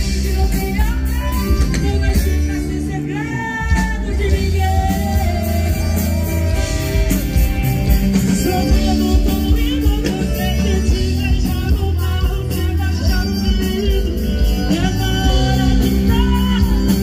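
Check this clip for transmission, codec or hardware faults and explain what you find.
One fault stands out: a single click at 8.60 s. The likely cause is dropped samples, where a handful of samples, well under a millisecond of audio, go missing and the waveform jumps abruptly to a later value. It sounds like one sharp tick, with no audible gap, and appears as a thin vertical line across the spectrogram.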